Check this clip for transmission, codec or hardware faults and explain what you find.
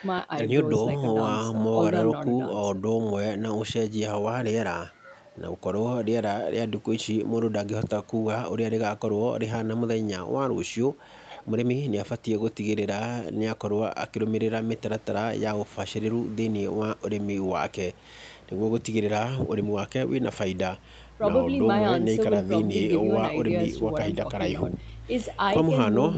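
No transmission, codec or hardware faults turn up in this speech clip.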